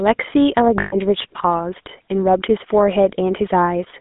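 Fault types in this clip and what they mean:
GSM full-rate codec: The whole clip has been through the old first-generation GSM codec, which models the vocal tract and feeds it a sparse, regularly spaced pulse excitation. That's where the gravelly, buzzy grain on the speech comes from, and it's plainly audible throughout. The line band runs only from about 200 Hz to 3.6 kHz, so the top is gone and it sounds boxed-in and phone-like, which fits the 13 kbps full-rate mode.
Lost GSM frames: From 0.8 to 0.96 s a run of frames didn't arrive, so the decoder concealed the gap by reusing the last good frame's settings. You hear that as a short metallic, ringing smear where the speech should be, holding briefly rather than cutting straight to silence. The loss is brief, just over a tenth of a second, so it never fully fades out before normal decoding picks up again.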